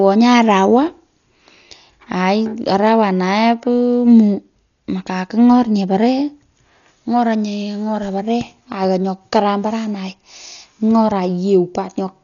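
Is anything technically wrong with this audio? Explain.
Yes. Throughout the speech, the sound is dull and heavily damaged, with nothing above 6.9 kHz and a rough, fluttering noise around voiced tones. This is likely Dolby Digital compression at a very low rate, around 40 kbps, where the encoder narrows the band and leaves many frequency lines without detail, so the decoder fills them with noise.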